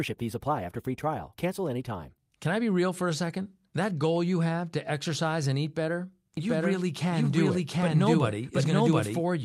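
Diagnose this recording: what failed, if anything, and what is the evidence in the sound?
A doubled audio track runs from 6.37 to 9.21 s, starting just after "exercise and eat better": a full-band copy at about the original's level trails by roughly 0.7 s, starting and stopping abruptly without decay or room colour. It's likely an edit or storage stage holding two out-of-step copies. Spectrograms show the pattern repeated, shifted right.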